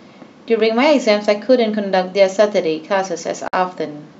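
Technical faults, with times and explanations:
3.48–3.53 s, gap at a join of encoded pieces: the speech drops to silence for 53 ms and resumes where it stopped, as untrimmed encoder delay and end padding sit at the join. The waveform shows a flat stretch with slightly smeared edges, and the spectrogram a vertical blank strip.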